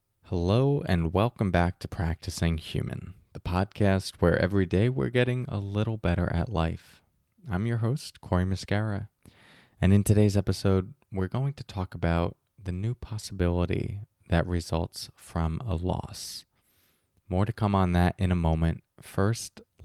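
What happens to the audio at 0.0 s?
Nothing goes wrong at 0.0 s; the speech starts cleanly, with no dropout, click or distortion at that moment.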